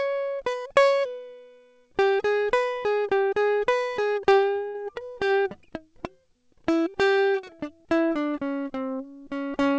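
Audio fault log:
4.68–4.76 s, burst of packet loss: a short run of packets arrived too late or not at all. The receiver held and faded the last music it had for about 65 ms, then resumed about 60 ms further on, leaving a brief smeared hold and a small skip.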